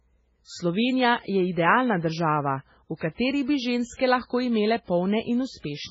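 Throughout the speech, nothing is present above 7.7 kHz, and the remaining band has a heavy watery, swirling texture as weak spectral detail flickers in and out between frames. This is likely MP3 compression at a very low bitrate, around 16 kbps, where the encoder runs short of bits, cuts the treble at a fixed point and discards the quieter frequency lines.

Pre-echo appears twice. From 2.97 to 3.01 s, just after "je idealna država v", a hiss runs for about 45 ms ahead of an attack. From 3.97 to 3.99 s, just before "lahko imele", a similar hiss lasts about 25 ms. In both cases the transform block spreads quantisation noise sized for the loud onset back into the quiet moment before it, so each onset sounds softened and smeared.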